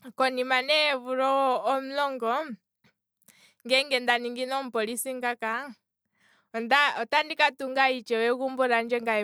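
Nothing stood out on listening to this speech recording.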